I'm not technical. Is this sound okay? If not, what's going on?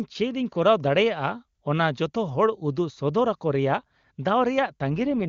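No. At 4.91 s the speech turns rough and machine-like until 5.26 s. This is an AMR rate drop. The phone network squeezed the HD Voice call into far fewer bits, likely because of a weak signal. Clarity suffers, but nothing drops out.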